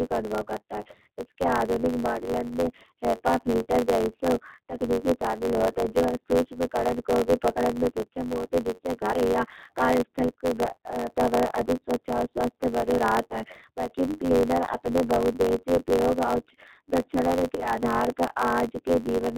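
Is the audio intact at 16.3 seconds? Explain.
No. At 16.3 seconds, as across the whole clip, the speech carries G.729 codec damage that is plainly audible. The coder rebuilds each 10 ms frame from a vocal tract filter, a pitch predictor and a few pulses rather than the original waveform, so the speech sounds rough and synthetic. Nothing above 4 kHz survives, which is consistent with an 8 kbit/s G.729 stream.

A block size mismatch (truncated) is also present throughout, including at 16.3 seconds. One stage writes longer blocks than the next stage reads, and the tail of every block is discarded. The sound points to a 512-sample write block. Each dropped tail leaves a discontinuity, so a buzz runs at 91.9 Hz, the block rate. Because material is removed, the audio plays 1.07 times faster than it should.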